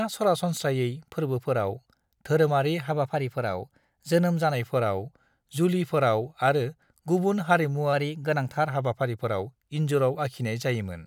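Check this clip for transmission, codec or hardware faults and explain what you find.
The speech carries two drift correction steps, from 2.9 to 4.54 s and from 7.93 to 8.66 s. Each sounds like the playback running about 5.8% fast, raising pitch roughly 98 cents, nearly a semitone, before snapping back. The likely cause is clock-matching software changing rate in one step to rebalance its buffer.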